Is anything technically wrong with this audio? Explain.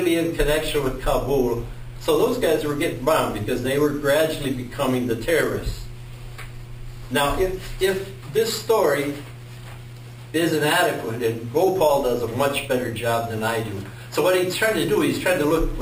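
Yes. Throughout the clip there is imaging from sample-and-hold upsampling. The audio was raised from 12 kHz to 48 kHz by repeating each sample four times without smoothing, so mirrored copies of the spectrum sit about 18 dB below the signal. The lowest copy spans 6 to 12 kHz and is heard as a bright metallic fizz that tracks the sound's level and moves against its pitch. A spectrogram shows an inverted reflection above 6 kHz, and the waveform shows a staircase of flat steps.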